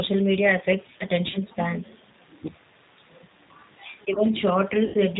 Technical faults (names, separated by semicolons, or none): G.729 codec; VoIP packet loss concealed by the speech codec